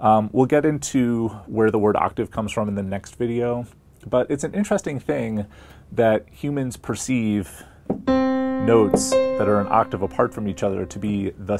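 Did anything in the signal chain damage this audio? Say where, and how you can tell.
No, nothing in the signal chain damaged this audio.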